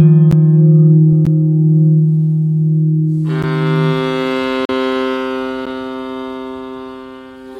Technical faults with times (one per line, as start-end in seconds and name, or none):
0.31 block of digital silence
1.25 block of digital silence
3.42 block of digital silence
4.65-4.69 block of digital silence
5.65 block of digital silence